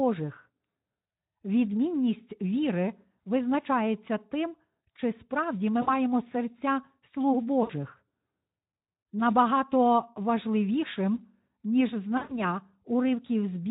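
At 5.81 s, right after "тим чи справді ми" and before "серця слуг", then at 7.63 s just after "серця слуг", and again at 12.17 s, VoIP packet loss concealed by the speech codec fills the gaps. About 60 ms is missing at the first two and 120 ms at the third, which fits three and six lost 20 ms frames. The decoder stretches its last pitch and filter into a buzzy tone or a coloured noise that fades. On a spectrogram this shows as flat bands that dim, and the waveform shows a stretch that tapers before the light Speex-coded speech resumes.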